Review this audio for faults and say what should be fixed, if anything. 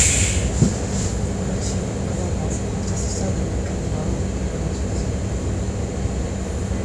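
No faults; nothing needs fixing.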